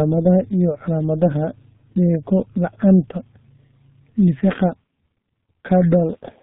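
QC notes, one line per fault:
Throughout, G.723.1 codec: the speech is heavily muffled and hoarse, with smeared consonants, which fits a G.723.1 link at about 6.3 kbit/s. Nothing above 4 kHz gets through, and its slowly updated 30 ms voice model blurs fast transitions into a rough, hoarse texture.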